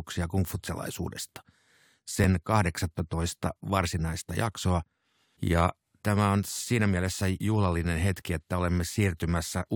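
At 2.24 s and again at 4.22 s the speech jumps with a tiny skip, an overlap between stream segments: a few milliseconds at each segment boundary, about 2 s apart, are trimmed away, leaving a waveform step and a thin vertical broadband line on the spectrogram.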